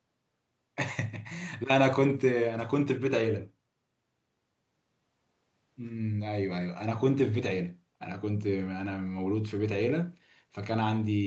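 No technical faults are audible.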